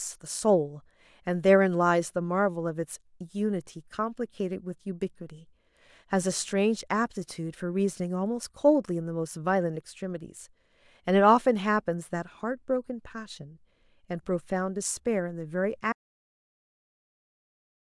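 At 15.93 s the speech just stops dead and never comes back, so the last 2.03 s of the clip is an audio dropout to silence. It's plain silence, with no room tone or hiss underneath, which tells you the recorder kept writing samples after its input vanished. The likely culprit is a lost input, say a device disconnecting, a link failing or a mute getting hit. Whatever was said in that stretch is gone.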